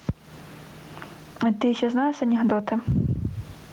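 Gain pumping runs through the whole speech clip: the room noise sits about 43 dB under the speech, and the gain swings by roughly 15 dB. The likely cause is microphone gain set far too high, with a fast limiter clamping it down. Unlike a noise gate, the background never cuts out, and the speech itself sounds squashed and flattened in level.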